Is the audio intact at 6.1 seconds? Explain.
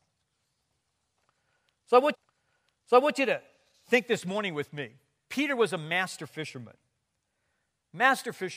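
Yes, the speech at 6.1 seconds is intact, with no dropout, click, distortion or other fault at that moment.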